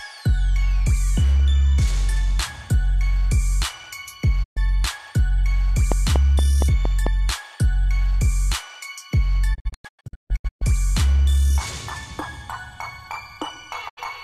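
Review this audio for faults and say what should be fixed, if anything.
Digital broadcast dropout occurs three times. At 4.42 to 4.58 s the receiver stopped getting usable frames and muted. The sound fades to silence in about 20 ms and 120 ms of programme is lost, which fits roughly five frames of about 24 ms each. From 9.53 to 10.63 s the reception failed in bursts, leaving several short holes scattered over about 1.06 s. Together they remove 720 ms of programme, and the longest gap lasts 144 ms. At 13.88 to 13.99 s a third mute removes 72 ms, again with a 20 ms fade. A stronger, cleaner signal at the receiver, through better antenna placement or more robust error protection, would prevent these mutes.

A train of clicks runs from 5.92 to 7.08 s. Something was injecting pulses into the signal path, likely interference from nearby equipment or a faulty connection. It produces around seven near-identical ticks at a steady 4.35 per second, standing well above the programme at roughly 15 dB louder. 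Because the pulses are added on top of the audio, they stay audible whatever is playing beneath them. Shielding the cabling and moving or isolating the offending equipment would stop the pulse train.

Dropped samples occur once, at 12.91 s. The stream skipped about a single sample, a tiny fraction of a millisecond, likely from a brief timing slip between clock domains or buffers. The waveform jumps abruptly from one value to a later one, and that discontinuity is heard as one sharp click. It shows as a thin vertical line across the whole spectrum, while no audible material is actually missing. Locking all devices to a common clock would prevent such sample slips.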